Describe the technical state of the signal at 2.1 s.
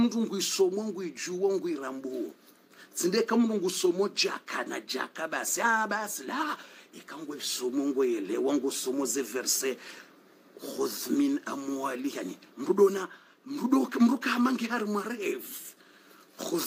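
At 2.1 s the signal is intact, with no dropout, distortion, or other fault audible at that moment.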